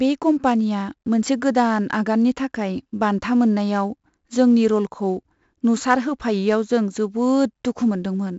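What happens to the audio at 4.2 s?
At 4.2 s the speech carries 4-bit ADPCM compression, present across the whole clip: each sample is a coarse 4-bit step from a prediction, so a gritty hiss rides on louder sounds and sharp onsets distort. On a spectrogram, noise fills the gaps between harmonics and everything stops near 7.7 kHz, which fits a 16 kHz sample rate.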